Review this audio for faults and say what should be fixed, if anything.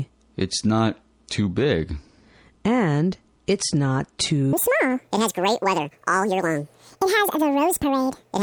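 From 4.53 s to the end at 8.42 s, a wrong sample rate fault makes the audio run at twice its proper speed and a full octave (12 semitones) high. That 2:1 ratio fits material recorded at about 22 kHz being played at 44.1 kHz with no conversion. Prevent it by reading each source's sample rate and resampling to the output rate before playback.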